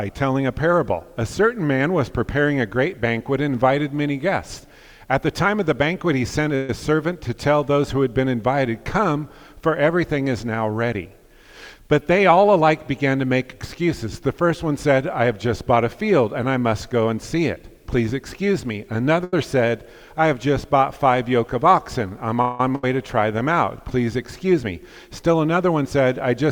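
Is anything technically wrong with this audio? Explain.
Yes, there are several network-delivery faults. A call audio freeze at 6.55 to 6.70 s and at 22.42 to 22.60 s was likely caused by held-up packets draining the jitter buffer. The last sound carries on as a fading buzz for 134 ms and 178 ms, then resumes where it stopped.

A jitter buffer speed-up at 10.94 to 13.16 s (106%) and 24.47 to 25.35 s (107%) trims repeated pitch-period slivers to shed excess buffered delay. That removes roughly 150 ms and 70 ms, so the sound runs slightly hurried at unchanged pitch.

A short stall from a late packet at 19.24 to 19.34 s stretches the preceding sound for 89 ms until the packet arrives, giving a briefly held, faintly buzzy moment.

A skip ahead at 22.75 to 22.84 s drops roughly 150 ms of audio while later audio was already waiting. Playback jumps forward with a short 75 ms fill bridging the join.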